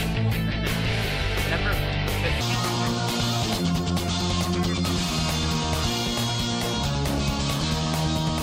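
From 2.41 s to the end, a section at the wrong speed plays 1.6 times too fast, likely from being clocked at the wrong rate. Pitch jumps up about seven semitones and everything sounds hurried. On a spectrogram, harmonics shift upward and events compress in time.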